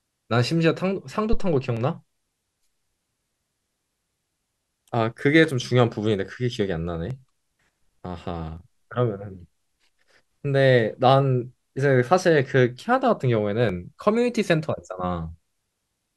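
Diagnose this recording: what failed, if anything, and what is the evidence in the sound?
A deep, low thump lands at 1.33 s and has died away by 1.61 s, decaying over about 63 ms. This is a phantom power thump in the analogue front end: a supply voltage switched on a live microphone input, its step pushed through the coupling capacitors into the speech path.

Single sharp clicks appear at 0.80, 1.77, 7.11, 8.57 and 13.69 s, each a thin vertical line across the spectrum with no audible gap. These are most likely dropped samples at the driver or buffer stage, with under a millisecond missing so the waveform jumps abruptly.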